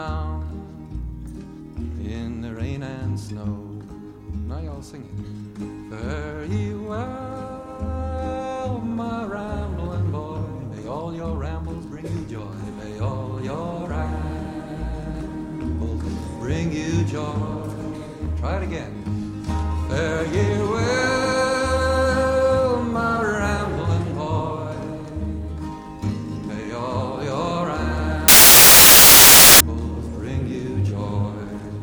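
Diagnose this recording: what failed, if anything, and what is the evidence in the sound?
Sample-format conversion failed: samples built from the wrong bytes from 28.28 to 29.60 s. Misassembled bytes push low-order bits into the high-order position, giving loud, harsh broadband noise.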